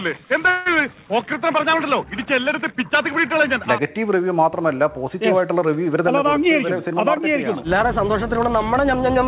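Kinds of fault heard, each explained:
Call audio freeze: packets were held up in transit and the jitter buffer ran dry, most likely from network delay. From 0.50 s the receiver stretched the last sound into a short fading buzz or hiss for about 0.16 s, then resumed where it stopped, so nothing was lost.
Jitter buffer speed-up: the buffer had built up more audio than its target, so the receiver trimmed pitch-period-sized slices repeatedly to shed the delay. From 5.94 to 8.89 s the audio runs about 5% fast at unchanged pitch, losing roughly 150 ms overall and sounding slightly hurried.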